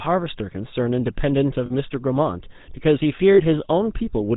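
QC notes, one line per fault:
Throughout: GSM full-rate codec. The speech has that buzzy, gravelly GSM roughness and nothing above 4 kHz, since the codec rebuilds the voice from a vocal-tract filter fed by sparse, regularly spaced pulses. The damage is plainly audible, and the sound points to the 13 kbps full-rate coder.
1.66–1.73 s and 3.34–3.42 s: lost GSM frames. Each gap is about 40 ms, which fits two dropped frames. The decoder repeats the last good frame's settings, so instead of the real speech you hear a brief rough, metallic ring.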